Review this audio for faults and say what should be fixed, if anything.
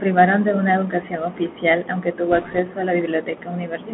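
The whole clip runs through a Bluetooth CVSD headset codec. The speech is squeezed into roughly 150 Hz to 3.5 kHz, s sounds come out scratchy, and there's a grainy hiss underneath, which fits a 64 kbps CVSD stream whose one-bit step can't keep up with bright, loud sounds. To prevent it, record on a wired mic or a wideband codec like mSBC instead of the headset's narrowband mode.

From 2.32 to 2.59 s there's a burst of bit errors on the Bluetooth voice link, a rushing, crackly noise laid over the speech rather than sharp clicks. Each flipped bit only nudges the CVSD step a little and then fades, and the amount of crackle here suggests an error rate of around one percent. To prevent it, keep the headset close to the receiver and clear of Wi-Fi and other 2.4 GHz interference.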